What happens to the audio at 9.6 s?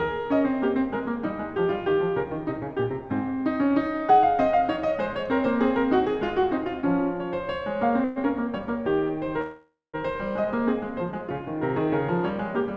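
At 9.6 s the music stops moving forward. From 9.41 to 9.96 s the last sound is held as a fading buzz that ends in about 170 ms of silence, and then the music resumes exactly where it left off. This is a call audio freeze, likely caused by packets stalling in transit so that the jitter buffer ran dry. The receiver filled about 0.52 s with synthetic continuation, so nothing is lost, but everything afterwards arrives that much later.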